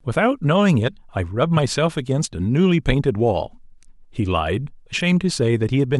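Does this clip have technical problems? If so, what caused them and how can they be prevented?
Yes: corrupt frame decoded, from 1.56 to 1.59 s and 4.99 to 5.01 s. Damaged compressed frames played anyway put energy at wrong frequencies, unlike a click. Checksums with frame concealment or retransmission would prevent it.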